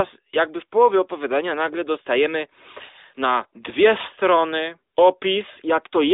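No faults are audible in this speech clip.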